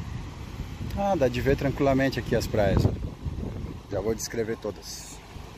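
From 0.59 to 4.78 s, regular clicks recur every 1.4 s, likely clock drift buffer slips: a clock mismatch of roughly 150 ppm dropping or repeating a few samples each time.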